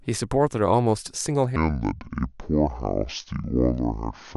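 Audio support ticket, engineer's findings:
Section at the wrong speed, 1.56 s to end of clip. Speech abruptly slows to about 0.59x and drops roughly ten semitones, deep and dragged. Likely cause: playback or resampling stage running on a mismatched clock. Spectrogram: harmonics and formants shift downward at 1.56 s, spaced tighter, high band thins. Waveform: syllable envelopes stretched, longer gaps between peaks.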